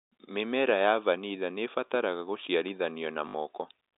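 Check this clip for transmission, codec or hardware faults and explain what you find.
There is one transmission fault, packet loss with the last packet repeated, from 3.28 to 3.34 s. About 60 ms of speech never arrived, which fits three lost 20 ms packets, and the receiver filled the gap by replaying the last good packet until new ones came. The loops ignore the pitch period, and the run buzzes at about 50 Hz, a brief robotic stutter. The G.711 telephone coding, with its 300 Hz to 3.7 kHz band, is working normally.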